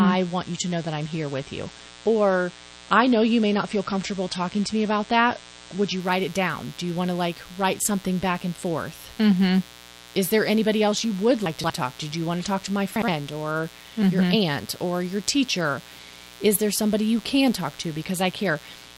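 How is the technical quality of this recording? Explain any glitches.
The recording has three technical problems: a constant electrical buzz, a dull opening, and two brief jumbled moments in the speech.

Mains buzz runs throughout. Switching spikes from a dimmer, rectifier or unshielded cable leak into the signal twice in every 60 Hz mains cycle, producing a raspy buzz roughly 25 dB below the speech.

An adaptive stream starting at a low bitrate affects the first 6 s. The player began on a low-quality version, which sounds like about 32 kbit/s MP3, and then stepped up to roughly 128 kbit/s. Until then, nothing above 9 kHz survives, so the speech sounds muffled and smeared before clearing abruptly, without a gap.

Chunks out of order appear at 11.46 to 11.7 s and again at 12.96 to 13.08 s. A block of audio arrived late and played after the material meant to follow it. The pieces fit 60 ms chunks, displaced by three chunks the first time and one the second. 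Each spot is heard as a garbled jumble.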